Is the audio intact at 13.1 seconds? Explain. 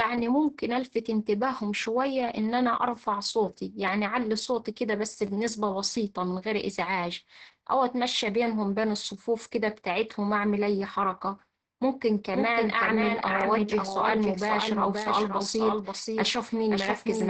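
No. At 13.1 seconds the speech sounds muffled and hoarse, with a faintly robotic edge, and nothing is heard above about 8.3 kHz. This is Opus voice compression in its SILK mode, present for the whole clip. The linear-prediction coder limits the band to wideband and codes the excitation coarsely, and damage this heavy fits a bitrate of around 10 kbps. That bitrate is too low to keep the voice clean.

A second copy of the sound also runs behind the first. It trails by about half a second and is only a few decibels quieter. It has no decay or room colour, so it is not an echo from a space. This doubled audio track begins abruptly at 12.34 s and lasts to the end. The likely cause is the same audio being captured again through a slower path, or an edit leaving two copies out of step.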